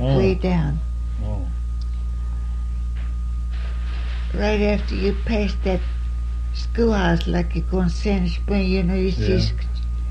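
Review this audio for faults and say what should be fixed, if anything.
Nothing in the signal needs fixing, since no technical fault can be heard anywhere in the recording.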